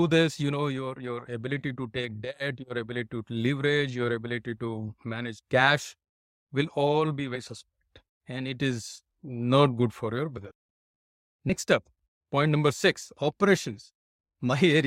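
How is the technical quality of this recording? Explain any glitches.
The speech has three brief dropouts where compressed frames were skipped. They come at 7.35 s, after "cash will all be", at 10.37 s, after "not good for your", and at 11.49 s, just before "up point number six". At each one the playback jumps ahead. The first two lose about 70 ms and the third about 40 ms, which fits a few 20 ms frames going missing or being rejected by the decoder.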